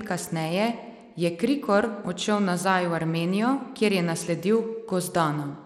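From start to finish the speech carries plainly audible damage that sounds like Bluetooth SBC compression. The top end keeps thinning out and flickering, and a gritty haze sits on the sound. That's the likely cause: a simple sub-band coder with a tight bit budget starves the weak high bands and quantises the rest coarsely, leaving aliasing behind. The degree of damage fits a bitrate around 96 kbps.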